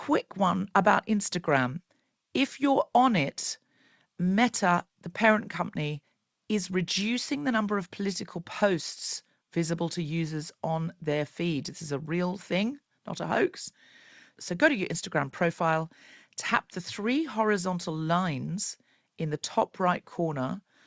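No technical faults are audible.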